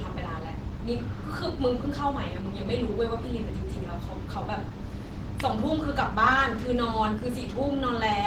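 From start to finish the speech carries plainly audible coding damage: a hoarse, muffled quality with grainy, noisy texture where tonal detail should be. This is likely Opus compression working in its hybrid mode, where a speech-oriented coder handles the lower band and the upper band is filled in from band energies, so detail turns rough. The audio still reaches about 20.1 kHz, and the degree of damage fits a rate near 16 kbps.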